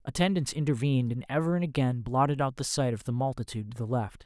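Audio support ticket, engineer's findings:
Listened through the speech clip and found nothing to flag, so no fault to log on this ticket.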